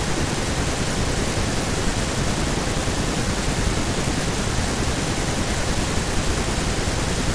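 No faults are audible anywhere in the recording.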